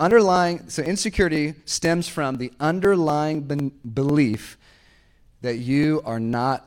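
Speech with periodic USB or driver dropouts from 0.11 to 6.58 s: about a millisecond skipped every 0.249 s, so you hear steady ticks only while there's signal.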